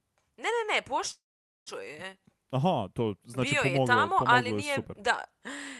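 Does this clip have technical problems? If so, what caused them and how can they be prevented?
Yes. A call audio freeze runs from 1.11 to 1.68 s. The last sound is stretched into a brief fading tail, then about 0.47 s of silence follows before the speech picks up exactly where it left off. Nothing is lost, but everything after is pushed about 0.55 s later. This likely happened because packets stalled in transit and the jitter buffer ran dry. A more stable network path, or a jitter buffer allowed to grow deeper, would prevent it.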